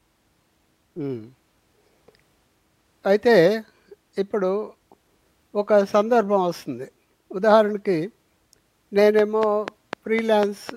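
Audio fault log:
9.19–10.70 s, train of clicks: a steady ticking of about seven sharp, near-identical pops runs over the speech near the end, spaced evenly at roughly 4 clicks per second, so they land on the pauses as well as the talking. Each click stands well above the voice, peaking about 15 dB over it. The regular spacing and repeated shape point to an outside pulse source, likely electrical interference from nearby equipment or a faulty connection or power supply.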